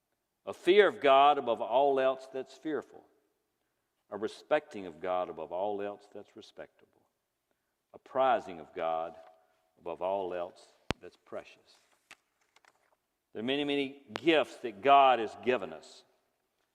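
A voltage spike, likely from a plug, switch, static discharge or driver glitch, breaks into the signal path twice, producing a loud pop at 10.91–10.93 s and another at 14.16–14.18 s. Each is a single sharp pop, roughly 20 dB and then 15 dB above the surrounding sound, which continues beneath.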